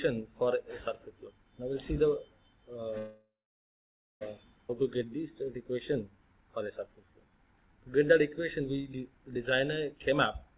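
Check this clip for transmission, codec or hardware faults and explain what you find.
There are four timing faults here, all of the kind you get on a network call, and they run into each other from about 3 s to the end.

Call audio freeze, 2.98 to 4.23 s: the sound stops moving forward and a short continuation of the last sound trails away into about 0.92 s of silence. That's likely a jitter buffer running dry while packets were held up in transit. When they arrive, playback resumes where it stopped, so about 1.23 s of gap has been inserted and nothing is lost.

Skip ahead, 4.69 to 4.71 s: right after the freeze, playback jumps forward with almost no gap, and roughly 0.7 s of audio is simply gone. It sounds like an abrupt splice, with the two sides butted together. The buffer had just absorbed over a second of extra delay, so it likely threw away a chunk of queued audio to catch up, clawing back about 0.7 s of that lag in one go.

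Jitter buffer slow-down, 4.83 to 9.86 s: for about five seconds everything plays at about 91% speed with the pitch unchanged, so sounds come out stretched. The buffer was building up a reserve by repeating single pitch periods and bits of pauses over and over, adding about 445 ms in total. The repeated cycles are what give that smeared, drawn-out texture.

Jitter buffer speed-up, 9.95 to 10.57 s: right at the end it swings the other way and runs at about 118% speed, again with the pitch held. It sounds hurried. The buffer now held more than its target, so it cut out short pieces of one or a few pitch periods in quick succession, removing about a tenth of a second overall.

Underneath all of this is a G.711 mu-law call path, which is why there's nothing above 4 kHz.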